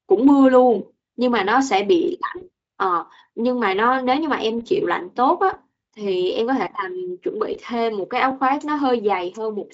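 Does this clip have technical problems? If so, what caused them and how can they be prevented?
Yes. VoIP packet loss concealed by the speech codec, at 2.37, 4.59 and 7.53 s: gaps of 40, 20 and 20 ms become a fading, buzzy or noise-like extrapolation of the preceding sound. Enabling forward error correction or packet redundancy and reducing network congestion would prevent it.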